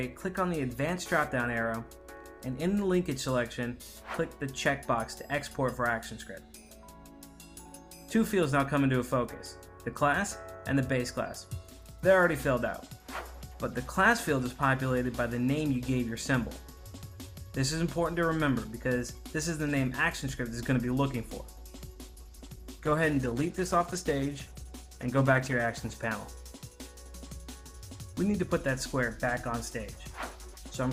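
From 21.95 s to 25.95 s the stream switches abruptly, without a gap, to a lower-bitrate rendition, the adaptive stream falling back after the connection slowed. Codec artefacts thicken for those four seconds, consistent with Opus stepping from 64 kbit/s down to 16 kbit/s.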